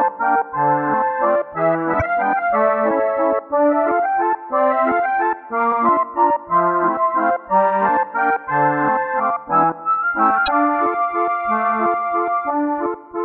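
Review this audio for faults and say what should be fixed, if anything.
Damaged data in a compressed stream appears three times: 1.98–2.02 s, 5.68–5.72 s and 10.44–10.48 s. Each is a glitch of about 40 ms as the decoder misreads corrupted frames and searches for the next frame header. Checksum-verified transfers and storage would prevent this.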